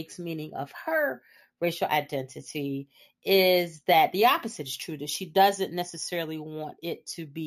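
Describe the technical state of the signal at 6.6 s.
At 6.6 s, as throughout the clip, the speech carries imaging from sample-and-hold upsampling: each 16 kHz sample was repeated to reach 48 kHz without smoothing, so mirrored copies between 8 and 16 kHz, about 17 dB down, add a metallic fizz that tracks the speech.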